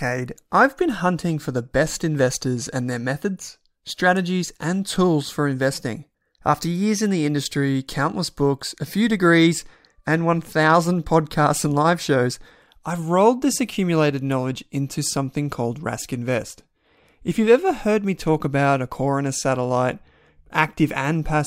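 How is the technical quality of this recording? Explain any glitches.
No technical faults are audible anywhere in the recording.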